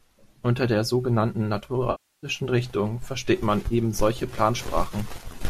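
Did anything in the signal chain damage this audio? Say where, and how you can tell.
Yes. After "der sogenannten", the sound fades to silence at 1.91 s and back by 2.27 s. After "versteht man", there is a brief smeared patch at 3.68–3.73 s. This is AAC frame loss with concealment, from the network or codec stage, likely in a low-delay AAC (AAC-ELD) stream: the decoder stretched the last good spectrum, then faded out across a 320 ms gap.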